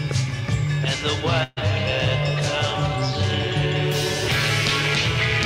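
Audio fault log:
1.43 to 1.68 s: burst of packet loss. Packets went missing or arrived too late to play. The receiver covered a gap of about 130 ms by carrying the last sound forward and fading it down. About 140 ms of audio is lost, so playback resumes further on.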